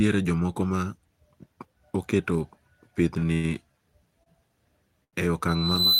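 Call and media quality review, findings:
Short stall from a late packet, four times in the speech: 3.19–3.25 s, 3.34–3.47 s, 4.23–4.29 s, 5.04–5.16 s. Jitter buffer underrun. The last sound is held for 24, 98, 30 and 86 ms, then playback resumes where it left off. No speech lost, just stretched syllables. Delay grows by the same amounts each time.

Loudspeaker feedback squeal from 5.48 s to the end of the clip. A single tone at 4 kHz swells over about half a second, reaching about 5 dB above the speech. Acoustic loop between speaker and microphone. Loop gain exceeds one at that frequency, so the tone keeps building until the clip ends.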